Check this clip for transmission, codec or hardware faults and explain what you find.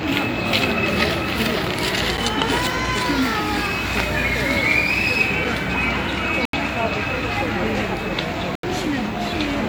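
Three blocks of digital silence turn up: a single tick at 2.17 s, then 80 ms holes from 6.45 to 6.53 s and 8.55 to 8.63 s. The output drops straight to zeros and back without a fade. The short one sounds like a tick, the longer two like brief gaps.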